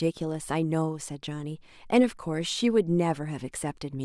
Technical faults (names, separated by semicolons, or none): none